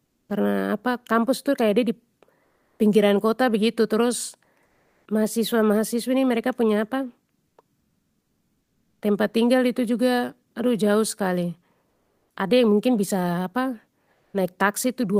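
Comfort noise in place of the background fills six pauses: 0.05–0.29 s, 2.43–2.79 s, 4.65–5.05 s, 7.79–9.01 s, 11.89–12.35 s and 14.13–14.33 s. The sender likely stopped transmitting whenever no speech was detected, as Opus DTX does, so the receiver substituted synthetic noise. The quiet background, about 50 dB below the loudest passages, turns flat and featureless there, its level shifting from about 3 dB quieter to about 5 dB louder.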